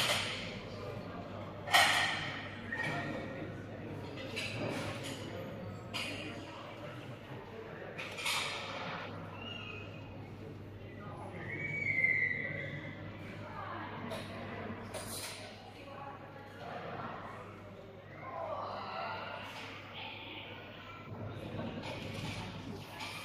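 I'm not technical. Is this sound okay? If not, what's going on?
Yes, nothing in this sound stood out as a problem when I listened to it.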